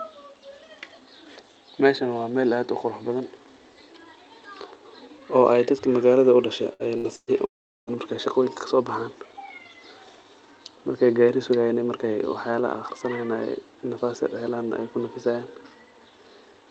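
Three bursts of packet loss hit in quick succession, at 6.73 to 6.83 s, 6.98 to 7.07 s and 7.16 to 7.30 s. Each time, packets failed to arrive, and the receiver stretched the last sound into a fading buzz or hiss before jumping ahead. About 60 ms is missing in the first two and 120 ms in the third, which ends in 40 ms of silence.

From 7.45 to 7.90 s the stream cuts out again, likely a long network dropout. Concealment carries the last sound briefly, then roughly 380 ms of silence follows, and the speech resumes with about 420 ms gone. All of this passes through a call codec path whose audio stops near 8 kHz, consistent with Opus at a modest bitrate.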